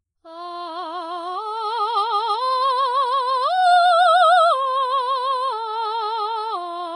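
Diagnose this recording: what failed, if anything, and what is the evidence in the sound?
Vorbis compression throughout, at the codec stage. The music stops dead above 10.6 kHz, and what treble remains is hissy and granular, with gritty tones and softened attacks. The likely cause is heavy Vorbis coding at a very low bitrate, where the high-band residue is quantised so crudely that detail turns into noise.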